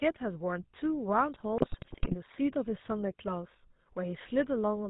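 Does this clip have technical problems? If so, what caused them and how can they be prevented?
Yes. Throughout the whole clip the speech carries the buzzy, gravelly roughness of the GSM full-rate codec, which fits a 13 kbps stream. This codec models the vocal tract and drives that model with a sparse pulse excitation, keeping only a fraction of the original detail, and it passes nothing above 4 kHz. The damage is plainly audible. What separates it from a simple telephone band-limit is the grainy, rasping texture layered on top of the muffled sound; a plain 4 kHz low-pass would sound dull but smooth. Prevention: carry the call over a wideband or more modern codec such as AMR-WB or Opus instead of GSM full rate.

From about 1.56 s to 2.15 s, GSM bit errors break the speech into squawks, pops and gargling. Corrupted bits reached the decoder and scrambled the filter, pitch and gain values of frame after frame, so the spectrum bends and the level jumps erratically over that stretch. 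The error rate this implies points to a badly degraded radio link. This differs from packet loss, which leaves gaps or smeared repeats of earlier sound. Here the sound keeps going but turns into distorted garbage, with sudden loud bursts. Prevention: keep the handset in stronger coverage, or use stronger channel coding and bad-frame detection so that corrupted frames are muted or concealed instead of decoded.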